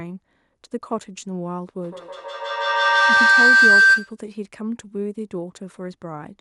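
At 1.82 s a feedback howl kicks in and keeps going until 4.2 s. Two devices in the same room have ended up in a loop: a loudspeaker's output gets picked up by a microphone and sent straight back, louder each time around. Instead of dying away, it narrows onto a whistle somewhere around 1.5 kHz. It pulses roughly every 150 ms and peaks at about 13 dB above the speech before it cuts off.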